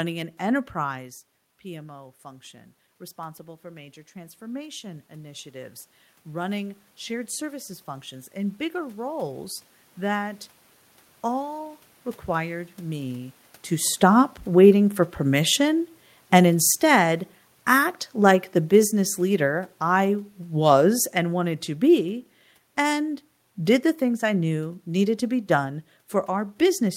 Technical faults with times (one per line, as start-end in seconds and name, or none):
3.15-9.61 automatic gain rising
13.88-22.14 automatic gain falling